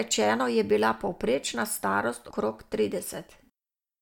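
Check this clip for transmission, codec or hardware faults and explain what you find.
One codec fault is present. At 2.30 s, compressed frames are skipped: the speech jumps forward by around 150 ms, which fits about five lost frames of roughly 26 ms each. The missing frames leave an abrupt jump ahead in the speech at the join.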